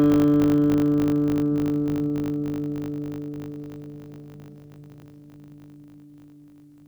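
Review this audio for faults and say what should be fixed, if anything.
A steady 50 Hz buzz runs through the whole music clip, rising and falling with the music's level. This is a filter restarted on every block: its state is cleared at each boundary, so every block starts with a small transient, pointing to 20 ms blocks. Prevent it by carrying the filter's state from each block into the next.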